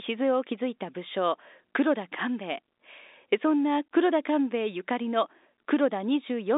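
No technical faults occur anywhere in this speech recording.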